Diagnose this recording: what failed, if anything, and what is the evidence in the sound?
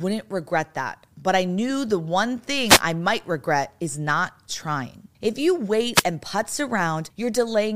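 Two wireless microphone noise hits in the analogue radio link: 2.67–2.81 s, between "I knew the one" and "I might regret is", and 5.94–6.04 s, before "and putz". Reflections cancelled the FM signal, so receiver static swished over the speech. They appear as brief broadband noise columns on a spectrogram.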